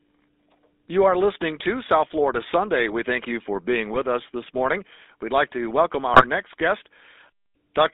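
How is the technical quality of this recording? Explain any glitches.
The recording has narrowband phone-call quality, with a buzzy, gravelly roughness throughout and two short bursts of garbled sound.

The roughness runs through the whole clip. The sound is thin and confined to roughly 300 Hz to 3.7 kHz, with a grainy buzz on every voiced syllable. That is the signature of the GSM full-rate codec, which fits its 13 kbps mode. It rebuilds speech from a vocal-tract filter driven by a sparse, regularly spaced pulse train, and that coarse excitation is what makes voices sound harsh and gritty.

The first glitch comes at 3.93 to 3.99 s, right after "thank you for being" and before "us this morning". It is a brief squawk and pop where the syllable collapses into gargle. The second lasts longer and is harsher, at 6.14 to 6.25 s, between "like to welcome" and "next guest". Both are GSM bit errors: corrupted bits reached the decoder and scrambled the filter, pitch and gain values for a few frames, warping the spectrum and spiking the level. 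The heavier damage in the second burst points to a higher error rate, about 3% against about 1.5% in the first.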